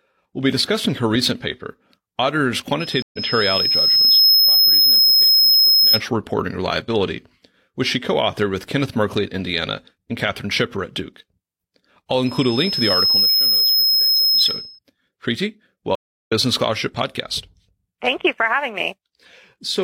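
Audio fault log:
2.80–6.01 s loudspeaker feedback squeal: a steady 5.2 kHz tone swells over about 1.5 s to about 10 dB above the speech, unlike a fixed hum that never builds.
3.02–3.19 s stream reconnect: 111 ms of silence, then speech resumes roughly 0.1 s further on, so material is skipped rather than repeated as in a stutter.
12.26–14.79 s loudspeaker feedback squeal: the same 5.2 kHz tone grows within about a second to about 5 dB above the speech, reaching its full level before it stops.
15.95–16.32 s stream reconnect: 322 ms of silence, after which speech picks up about 0.3 s later, a jump forward instead of a plain dropout.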